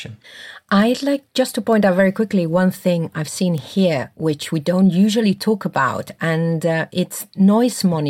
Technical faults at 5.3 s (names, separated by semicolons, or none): none